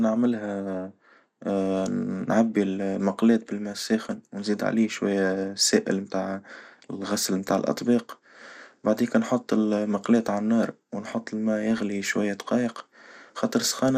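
From start to finish the speech shows plainly audible damage from MP2 compression, most likely a Layer II encoder at a rate of about 80 kbps. Starved of bits, it switches off upper sub-bands and quantises the rest coarsely, so the sound is dull, with granular gurgling that flickers as bands drop in and out.

At 11.71 to 11.78 s a burst of DAB burbling appears: bit errors, at around one in a thousand, slipped past error correction into the audio data, corrupting samples for about six frames. Short blips of noise appear in single sub-bands, producing a brief burst of burbling.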